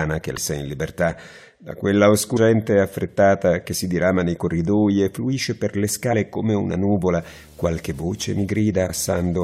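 Right at the start, around 0.36 to 0.38 s, there's a short glitch from damaged data in the compressed stream. Part of the encoded data is corrupted, so the decoder misreads those frames, loses sync and hunts for the next valid frame header, and that scramble comes out as a brief glitch. The same blip returns at about 2.36 s and again at 6.12 s, each one just a couple of hundredths of a second long.

From 7.06 s to the end there's video or display buzz. A screen or video cable is leaking into the audio path, giving a steady 75 Hz buzz, which matches the picture's field rate, with a layer of hash on top. It sits well under the wanted sound, roughly 25 dB down. While that buzz is running, one more corrupted-stream glitch pops out at about 8.88 s.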